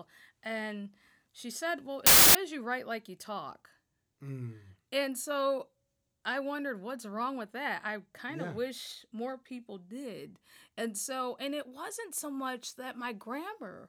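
From 2.06 to 2.35 s, between "she said well" and "you write like you", loud noise swamps the speech, which survives sped up 1.33 times. This wrong sample width fits packed 24-bit data read as 32-bit, splicing bytes across samples.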